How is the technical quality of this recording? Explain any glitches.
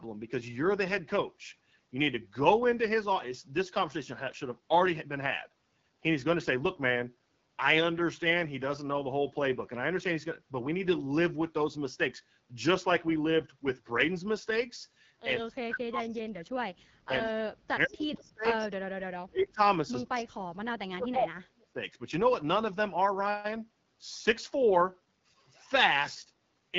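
The recording has plain, audible damage throughout, plus a cluster of trouble between roughly 15 and 22 seconds.

The whole clip carries the sound of the AMR wideband (HD Voice) codec running at one of its lowest rates. The rough, raspy texture on the speech fits the 8.85 kbit/s mode. At that rate the codec's pulse-based model of the voice runs short of bits, so the voicing gets grainy. Nothing comes through above 7.6 kHz, and the top of the band is synthetic noise rather than real detail.

The speech gets suppressed in double talk five times: 15.39–16.70, 17.05–18.69, 19.02–19.63, 19.90–20.59 and 20.84–21.78 s. The level drops sharply, by around 40 dB at worst, so the voice sinks, thins or breaks into pieces for about half a second to a second and a half each time. The likely cause is an echo canceller that couldn't tell its own talker from loudspeaker echo while the far side spoke, so it clamped down on everything.

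There's also echo leak at 16.11–16.16 and 17.87–17.91 s. These are brief, faint scraps of a delayed copy of the speech, 145 ms behind and roughly 35 and 25 dB below it. Most likely one side was on a loudspeaker, and its canceller let a bit of its microphone pickup slip back down the line.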